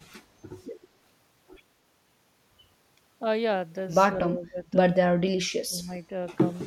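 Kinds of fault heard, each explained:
Speech suppressed in double talk: from 4.26 to 4.69 s the speech dips by about 15 dB, then from 5.34 to 5.91 s it drops by about 35 dB, nearly vanishing. The likely cause is an echo canceller that, with both sides talking, mistook this talker for echo and attenuated it.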